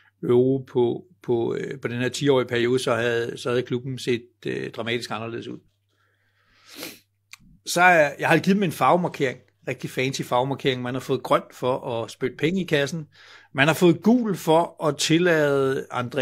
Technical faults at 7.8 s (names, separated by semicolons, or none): none